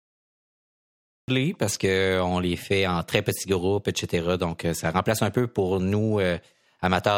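A speech recording with a cut-off start: capture began late, leaving digital silence until 1.28 s, then sound bursts in mid-utterance with no natural attack, just before "parce qu'on les fait".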